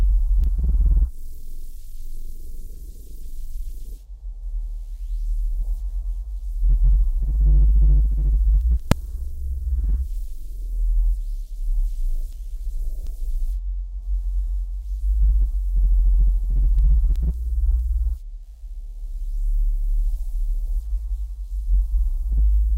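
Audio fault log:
8.92 s, invalid numbers at full scale: a single bang where a calculation produced invalid values, holding about 2.67 ms at one extreme, which fits a 128-sample block.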